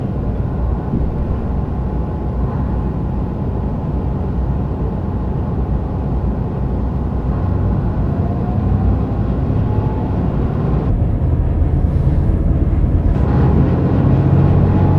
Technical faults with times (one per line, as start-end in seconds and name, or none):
10.90-13.15 wrong sample rate